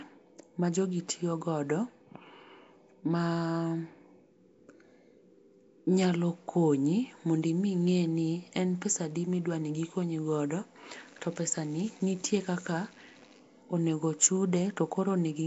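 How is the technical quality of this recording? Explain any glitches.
The recording is clearly degraded by a codec. Throughout, the speech carries a rough, hissy halo and a smeared, underwater quality, and nothing reaches above 7.7 kHz. The likely cause is Nellymoser compression, Flash's old microphone codec, at a rate that fits about 32 kbps. It codes short blocks with too few bits, leaving weaker bands empty and filling them with noise. On a spectrogram, harmonics look blurred and speckled with noise, with a hard ceiling at 7.7 kHz.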